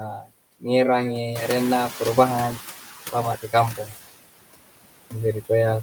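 A speech recording runs through a noise suppressor that cuts the steady background by about 19 dB. Its noise suppressor artifacts appear as residual noise that drops away between phrases. On a spectrogram the gaps show a blotchy, flickering texture rather than an even noise floor. Speech cut by the noise suppressor occurs three times: 0.18 to 0.32 s (dropping as much as about 19 dB), 3.42 to 3.54 s (about 14 dB) and 3.75 to 3.98 s (about 11 dB). Those stretches sound swallowed. The waveform dips sharply there, and the spectrogram shows missing speech energy. The room noise jumps by about 12 dB around 1.5 s, leaving it only about 13 dB below the speech. The noise suppressor catching up runs from 1.35 to 2.75 s. The louder noise leaks through at first and then sinks by about 10 dB as the estimate adapts over 1.4 s, visible as a bright noise band fading gradually.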